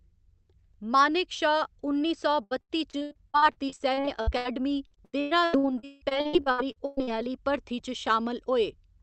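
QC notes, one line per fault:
2.43–4.47 s, repeated packet loss (robotic sound): just after "मानेक शा उन्नी सौ", 17 short holes, the longest 80 ms. Each is filled by extending the previous sound, so about a third turns choppy rather than dropping to silence.
4.87–7.31 s, repeated packet loss (robotic sound): 20 holes, up to 161 ms, with about 41% concealed. The rapid succession of gaps sets this apart from one isolated dropout.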